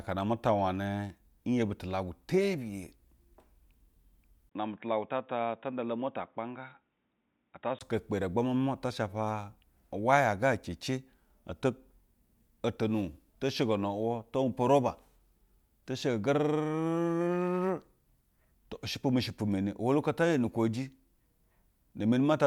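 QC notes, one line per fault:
4.49–7.81 s, input switched to a poorer device: the recording input was likely handed to a lower-grade microphone or a headset's call profile, and then back. After a 20 ms gap at the switch, the speech is cut off above 3.8 kHz, so it turns dull and boxy, and it drops about 5 dB in level. A faint new background noise sits far below the speech, roughly 55 dB down. At 7.81 s the full, brighter sound returns.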